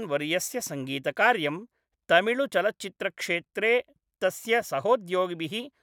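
No technical faults turn up anywhere in this speech recording, so there is nothing to flag.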